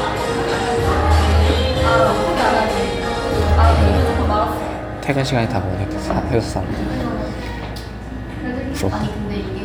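Everyday sounds, with no technical fault heard anywhere.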